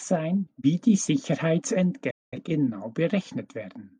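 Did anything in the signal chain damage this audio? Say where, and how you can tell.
Yes. A digital broadcast dropout occurred in reception: the receiver lost the signal or frames failed their checksum, so it muted until good frames returned. The speech fades out over about 8 ms at 2.10 s and returns at 2.38 s, a roughly 0.21 s hole consistent with about five lost frames.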